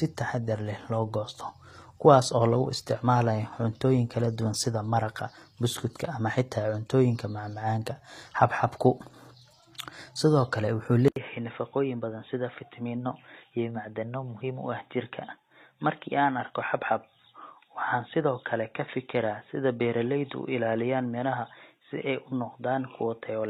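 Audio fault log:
Throughout: HE-AAC compression. The treble sounds gritty and metallic, with s sounds turned lispy, and nothing reaches above 14.9 kHz. This is likely HE-AAC at a low bitrate, around 24 kbps, coding only the lower spectrum and rebuilding the top by copying lower bands upward, so harmonics misalign across the crossover.
11.08 to 23.49 s: input switched to a poorer device. After an 80 ms silence, the sound turns dull and boxy, drops about 5 dB, and gains new background noise roughly 55 dB down, with nothing above 3.8 kHz. The input likely changed mid-recording to another microphone or a headset's call profile with a narrower band.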